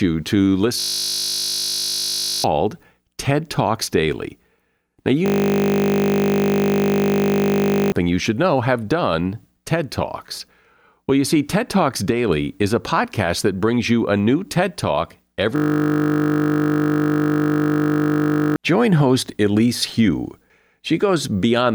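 Three times the playback freezes into a system hang loop, where the machine stalls and the hardware keeps replaying the same 20 ms slice of its buffer. At 0.8 to 2.44 s, 5.26 to 7.92 s and 15.56 to 18.56 s, the speech turns into a flat 50 Hz buzz, and each time the audio picks up again further on, skipping roughly a second and a half, then about three seconds, then another three.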